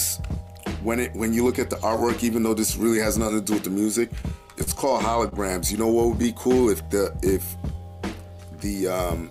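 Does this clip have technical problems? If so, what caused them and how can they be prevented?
Yes. There are two short stalls from late packets, at 4.63 to 4.69 s and 5.29 to 5.34 s. A packet didn't arrive on time, so the jitter buffer ran dry and the receiver stretched the last bit of sound, for about 39 ms and then 30 ms, before picking up where it left off. Nothing's lost, but you hear a brief hold with a faint buzz or dip. A slightly deeper buffer target or a steadier network path would prevent these.

Then from 6.48 to 7.99 s there's a jitter buffer slow-down. The buffer was rebuilding its reserve by repeating pitch periods and small bits of pause, adding about 109 ms and running that stretch at 93% speed with the pitch unchanged, so things sound a bit drawn out. Keeping the buffer better stocked ahead of time would avoid having to catch up like this.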